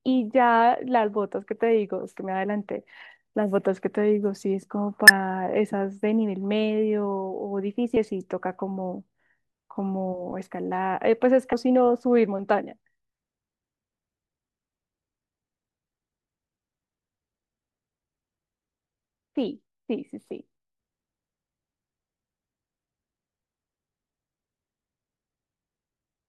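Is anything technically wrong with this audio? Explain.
Yes. Damaged data in a compressed stream causes brief glitches at 5.08–5.10 s, 7.96 s and 11.52 s, where corrupted frames make the decoder lose sync and resynchronise.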